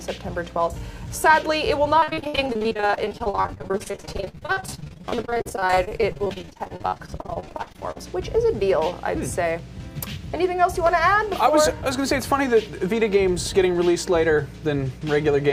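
From about 2.0 s to 8.0 s there's repeated packet loss, giving that choppy, robotic sound. Gaps up to roughly 60 ms keep getting patched by stretching the previous sound, covering over 40% of the stretch.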